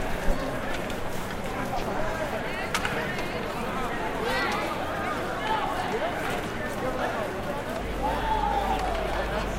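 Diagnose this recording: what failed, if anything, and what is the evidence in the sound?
The analogue wiring failed, and the result is mains hum. At 7.81 s a steady low tone at 50 Hz appears and continues to the end at 9.58 s. It sits only a few decibels below the sound itself, so it is plainly audible. The pitch locks to the 50 Hz power line. That points to a ground loop or a nearby transformer coupling mains current into the signal path before conversion.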